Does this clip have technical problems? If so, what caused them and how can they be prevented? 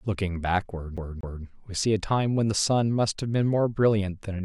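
Yes. From 0.97 to 1.45 s the speech locks into a CD stuck on one turn: a single 240 ms fragment plays twice in a row, with a brief mute at each jump, producing a fast, even stutter. This is a skipping disc, where a scratch or defect makes the laser fall back one track at the same point on each rotation, so the same slice of audio repeats until playback moves past it. Prevention: rip from a clean, undamaged disc using secure, error-checking extraction.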